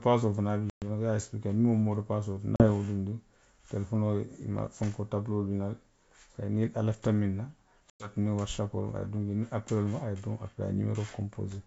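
Packet loss on an ADPCM call at 0.70 s, 2.56 s (before "ye wo dunndi") and 7.90 s (after "lafita miŋ na") cuts hard silent gaps of 120, 40 and 100 ms. The decoder's predictor and step size then drift from the sender's, so speech returns with brief distortion.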